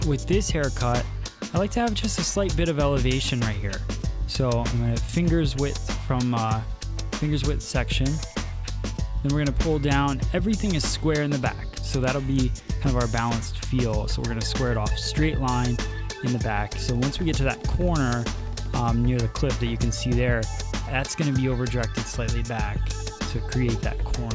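From 11.6 s to 13.48 s the sound carries a rough, regular ticking at 25 per second, the mark of a resampler restarted on every block. Each 40 ms block was converted in isolation, so the filter at each edge worked from missing or wrong neighbouring samples, leaving a small discontinuity at every boundary. The ticks follow the signal and fall away when it does, and the pattern fits a conversion from 24 kHz down to 16 kHz.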